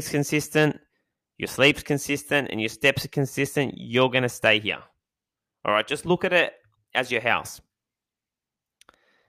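Nothing technical stands out in this speech recording; there's simply no fault to point to anywhere in it.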